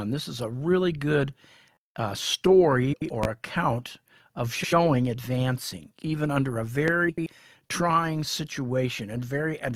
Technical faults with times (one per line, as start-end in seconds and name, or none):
2.93-3.10 frames out of order
3.23-3.27 loud pop
4.55-4.73 frames out of order
6.88-6.91 loud pop
7.09-7.26 frames out of order